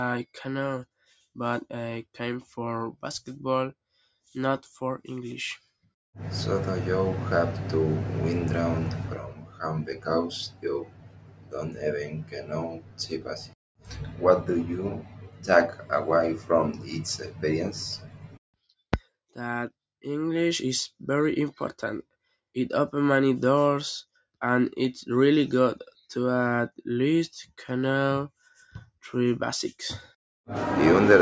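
All the way through, a noise suppressor built for speech is acting on the sound, pumping the level up and down by roughly 15 dB. It treats held, steady material as noise, so sustains and tails keep sinking while attacks get through.

The clearest cases are where the noise suppressor cuts the sound: 9.15–10.08 s, 10.28–13.55 s, 13.76–14.22 s, 14.94–15.49 s, 15.68–15.92 s, 16.72–17.44 s and 17.7–18.38 s. The deepest drop is about 19 dB, and decays get clipped short. All of this comes through the call's microphone processing, which tops out at 8 kHz.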